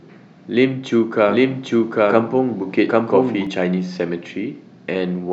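From 1.29 s to 3.47 s the speech carries a doubled audio track: a second full-band copy, about as loud as the original, trails it by roughly 0.7 s. It is dry, with no decay, and starts and stops abruptly, most likely a slower second capture path.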